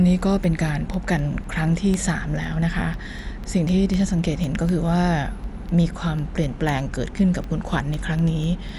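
The whole speech clip sounds dull and rough, with nothing above 11.4 kHz, which points to Dolby Digital compression as the likely cause. At a low rate, consistent with something like 64 kbps, the encoder narrows the band and leaves many frequency lines without mantissa bits, which the decoder fills with dither noise, so the damage is plainly audible.

From 0.19 s to 8.69 s there are periodic USB or driver dropouts: roughly forty tiny ticks spaced exactly 0.25 s apart. Each time, something blocks the audio path and a sliver of well under a millisecond is replaced by silence.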